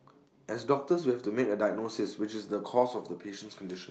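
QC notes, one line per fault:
The speech comes over a WebRTC call path that is working normally, with the coding texture and a top end stopping at about 12 kHz that fit Opus at a moderate bitrate, and nothing further stands out in the signal.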